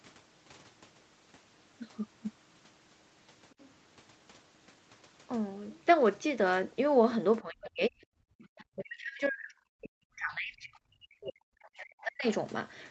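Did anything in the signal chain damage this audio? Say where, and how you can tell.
Yes. The call's echo canceller likely left loudspeaker residue, so the other side's voice leaks through faintly, roughly 35 dB below the speech, from 3.5 to 3.7 s.

The call processing likely mistook both talkers for echo. The result is speech suppressed in double talk from 7.42 to 12.26 s, with the voice dropping by as much as about 40 dB.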